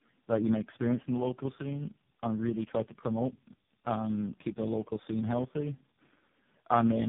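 Tandem speech coding runs throughout the speech: it sounds rough, muffled and warbly, as if decoded and re-encoded across several speech coders in series, each degrading the last. A spectrogram shows nothing above 3.8 kHz, with smeared, blotchy harmonics.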